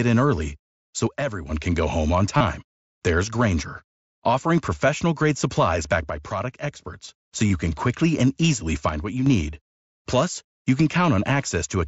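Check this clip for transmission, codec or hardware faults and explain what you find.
Yes, the speech has two kinds of fault: three level dips and two brief concealed dropouts.

One channel drops out at 1.07 to 1.51 s, 6.10 to 7.09 s and 8.89 to 9.26 s. Each time the speech falls abruptly by about 6 dB and then recovers just as suddenly. That figure is what happens when a stereo pair is summed to mono and one side goes silent: the shared content loses half its contribution. The likely cause is a momentary loss of one channel upstream of the mix.

Concealed Bluetooth headset packet loss occurs at 2.37 to 2.41 s, lasting 30 ms, and at 7.48 to 7.50 s, lasting 22.5 ms. These gaps fit runs of about four and three lost packets on the headset link. The receiver bridged each gap by repeating the closest-matching recent stretch of waveform, so the speech is briefly replaced by a short buzzy continuation, then a slight warble as real audio resumes. 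The mSBC wideband link underneath adds only light graininess.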